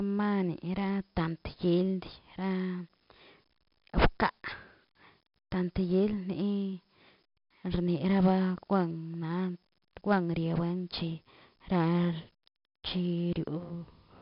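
A speech recording carrying 4-bit ADPCM compression from start to finish, and the damage is heavy. Every loud syllable drags a gritty hiss along with it, and sharp onsets crunch where the coder's step size lags behind the signal. Nothing reaches above 5.3 kHz, which points to a low sample rate near 11 kHz and about 44 kbps. A spectrogram shows a flat ceiling at 5.3 kHz and broadband noise that brightens and fades with the speech, while the waveform looks fuzzy on peaks.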